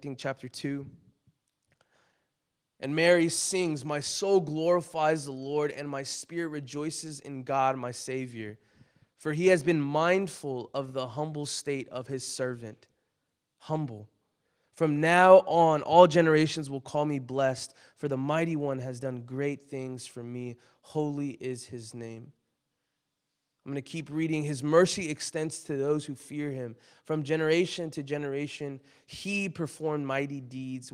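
No technical faults can be heard anywhere in the recording, and the signal stays steady and intact throughout.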